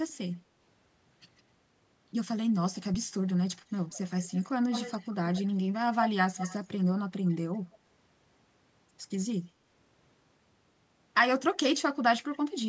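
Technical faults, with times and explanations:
0.09–0.13, 1.37–1.42, 3.7–5.48, 6.0–6.65, 7.24–7.35, 7.72–7.77, 9.19–9.25 and 12.33–12.39 s: echo leak. One side's echo canceller likely let loudspeaker pickup through. A delayed copy of the voice trails it by roughly 144 to 176 ms, with the lag creeping longer across the clip. Most scraps sit far below the speech, but 3.7–5.48 s is clearly audible and 6.0–6.65 s is nearly as loud as the voice itself, causing an obvious doubling.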